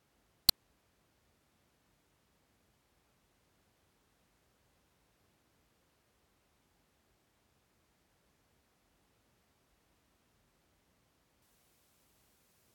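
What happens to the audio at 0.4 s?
Nothing goes wrong at 0.4 s; the speech there plays through intact, with no dropout, click, distortion or other fault.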